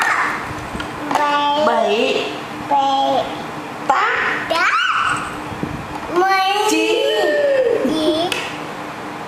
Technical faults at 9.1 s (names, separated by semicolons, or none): none